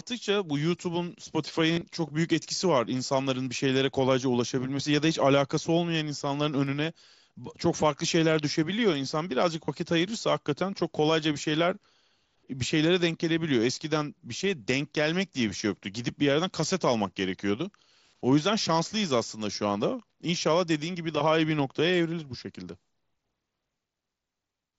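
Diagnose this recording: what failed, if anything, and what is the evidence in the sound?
Concealed Bluetooth headset packet loss on the headset-to-phone radio link: from 1.72 to 1.81 s, runs up to 37.5 ms buzz as a held tone, and a 30 ms loss follows at 9.65 s. The receiver refills gaps by repeating the best-matching recent waveform.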